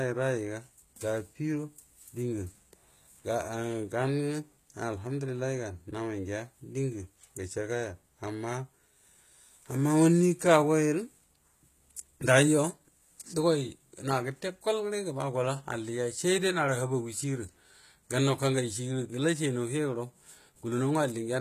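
HE-AAC compression runs throughout this speech, likely from a low-bitrate encode near 20 kbps: the rebuilt, copied-up treble turns s sounds gritty and metallic, with nothing above 14.9 kHz.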